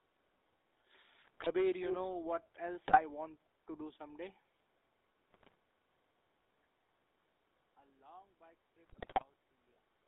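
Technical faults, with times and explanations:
Throughout: GSM full-rate codec. The speech has a buzzy, gravelly roughness that is plainly audible. This coder models the vocal tract as a filter and drives it with a sparse train of regularly spaced pulses, which fits 13 kbps full-rate coding. That coarse excitation causes the grain. The band runs from about 300 Hz to 3.7 kHz, so the speech sounds narrow and boxed-in, with no air above it.
1.22 to 1.47 s, 2.84 to 3.01 s, 5.31 to 5.55 s, 8.87 to 9.24 s: GSM bit errors. Each burst brings squawks, pops and a gargling break in the speech. The last one is the longest. Corrupted bits reached the decoder as if over a weak radio link. The filter, pitch and gain values then came out wrong. The spectrum bends and the level jumps for those frames before the decoder recovers.
1.80 to 1.96 s: echo leak. A delayed copy of the speech is heard about 213 ms behind the original. 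It is roughly as loud as the speech itself and lasts only a brief scrap. The likely cause is a far end playing the call on a loudspeaker, where the echo canceller failed to remove what its microphone picked up. The leftover was sent back down the line.
6.65 s to the end: one channel inverted. The speech suddenly drops by about 22 dB and turns faint. The likely cause is reversed polarity on one stereo channel. When the two channels are summed to mono, everything common to both cancels. Only the small difference between them survives, which leaves this faint residue.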